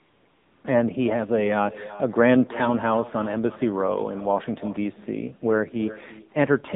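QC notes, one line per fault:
Throughout: echo with no canceller. Everything the talker says returns as a quieter, thinner copy, about 17 dB below the speech, roughly 300 ms later. The far end is playing the call through a loudspeaker, its microphone picks that sound up, and nothing in the path subtracts it, so the talker's own voice travels back across the network and trails each phrase.
Throughout: AMR narrowband mobile codec. The voice is confined to a band of about 150 Hz to 3.7 kHz, with nothing above 4 kHz, and the coding damage is plainly audible. AMR-NB rebuilds speech from a vocal tract model, a pitch predictor and a few pulses every 5 ms, so detail is lost and the voice takes on a synthetic, coded quality. The damage level fits a low mode such as 7.4 kbps.
0.00 to 0.64 s: AMR comfort noise. The opening 635 ms has a smooth, steady synthetic hiss where the real background should be, and it switches out when speech begins. 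The phone judged the talker silent and stopped sending speech frames. The receiver then filled the gap with noise generated from a coarse description of the background level and spectrum, so the actual room sound is replaced.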